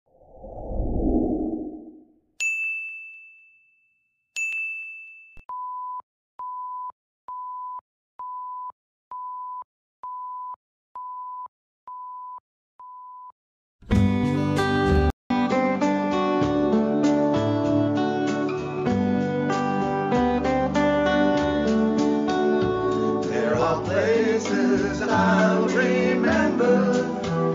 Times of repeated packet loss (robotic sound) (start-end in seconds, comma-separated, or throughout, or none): none